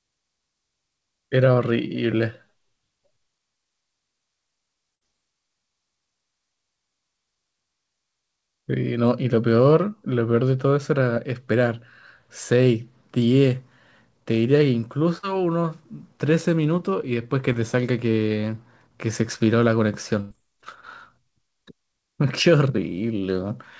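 At 4.95 s, 15.18 s and 20.21 s the sound briefly freezes into a held buzz or fading hiss lasting about 50 to 95 ms, then jumps ahead. Each is a burst of packet loss: the receiver extended the last sound while 40 to 100 ms of audio never arrived. At 11.15 s and 17.53 s, quick smears or wobbles mark short concealed packet loss, where about 20 ms went missing and was patched from the preceding sound.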